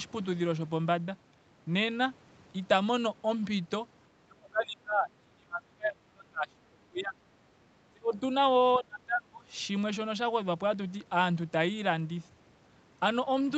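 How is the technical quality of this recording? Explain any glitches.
The recording has speech suppressed in double talk. The echo canceller likely mistook the talker for loudspeaker echo while both sides spoke and turned the voice down, so it dips by up to about 30 dB or breaks up from 4.25 to 7.18 s, 7.91 to 8.21 s, and 8.79 to 9.44 s.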